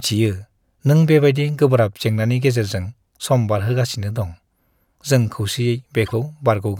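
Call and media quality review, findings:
Brief garbled flutter in the speech from 6.06 to 6.13 s. Frames out of order: two adjacent 26.1 ms blocks, which fits a single frame each, were decoded in swapped order, so the stretch plays with its halves exchanged. No time is lost, and the timing after 6.13 s stays in step. Probable component: receive-side jitter buffer or packet reordering before the decoder.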